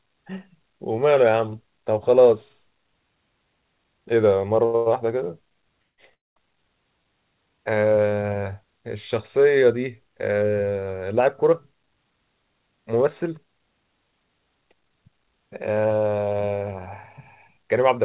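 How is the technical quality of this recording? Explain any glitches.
The recording has several timing glitches, all typical of a call link, and it's narrowband, with nothing above 4 kHz, which fits a 64 kbps G.711-style call codec.

At 4.65 to 4.76 s there's a short stall from a late packet. The receiver stretched the last sound for about 87 ms while waiting, so you hear a held moment. Nothing is lost.

Right after it, from 4.76 to 4.88 s, and again at 5.82 to 6.00 s and 6.14 to 6.38 s, you get call audio freezes, likely from packets held up in transit. Each starts as a fading continuation of the last sound. The second drops to silence for about 80 ms and the third for about 200 ms, then the audio resumes where it left off.

From 11.2 to 15.1 s there's a jitter buffer speed-up. The receiver trimmed about 0.4 s of tiny pitch-period chunks to cut the delay, so speech runs about 9% faster at the same pitch and sounds a bit hurried.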